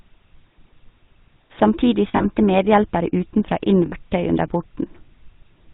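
From start to finish the speech carries the GSM full-rate codec's coarse, buzzy roughness, its gravelly texture consistent with 13 kbps full-rate coding. The codec rebuilds the voice from a vocal-tract model fed with sparse pulses, so a spectrogram shows nothing above 4 kHz and smeared harmonics below.

Lost GSM frames appear from 2.08 to 2.26 s, with about 120 ms missing across 160 ms and the longest gap around 70 ms, and again from 3.86 to 3.93 s for 60 ms. The decoder repeated the last good settings, giving a metallic ring. Spectrograms show smeared, frozen bands.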